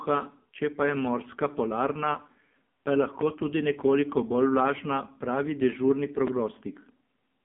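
Speech runs through an AMR narrowband mobile codec throughout, confined to 150 Hz to 3.5 kHz, with nothing above 3.5 kHz on a spectrogram. The buzzy, synthetic tone fits a low AMR-NB mode around 5.9 kbps.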